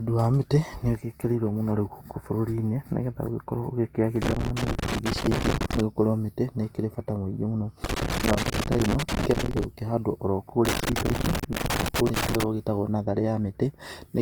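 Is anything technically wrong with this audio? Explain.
Yes. Throughout, the speech has a rough, grainy texture, likely from Opus compression in its music mode at a rate that fits about 24 kbps. Bands are filled with noise rather than left empty. On a spectrogram the highs look speckled, extending to about 20.3 kHz.

Loose connector crackle occurs from 4.22 to 5.80 s, 7.84 to 9.64 s and 10.65 to 12.44 s. A worn contact makes and breaks, chopping the signal into irregular scratching. This shows as broadband vertical streaks and a jagged, interrupted waveform.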